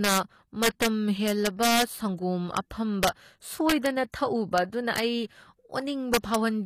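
Integer overflow runs through the whole clip. The level was pushed about 5 dB past the integer limit. A small fraction of samples, roughly 0.3 percent, wrapped to the opposite sign instead of being limited. Each one flips across the full range. These are heard as sharp cracks on the loudest peaks.

Codec damage is plainly audible throughout. The top of the spectrum stops at 14.9 kHz. The likely cause is HE-AAC compression at a low bitrate, consistent with about 24 kbps. The treble is rebuilt from copied lower bands, so it does not match the original harmonics.

Pre-echo appears from 6.20 to 6.24 s. A sharp attack fell late in a transform block. Quantisation noise meant for the loud part spread back across about 41 ms. A short hiss precedes the attack, and the onset sounds smeared.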